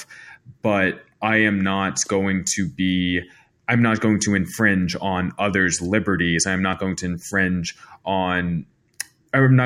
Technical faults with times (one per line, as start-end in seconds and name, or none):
none